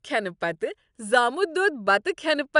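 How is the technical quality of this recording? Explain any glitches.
The speech recording has no technical glitches, and the signal holds steady and continuous throughout.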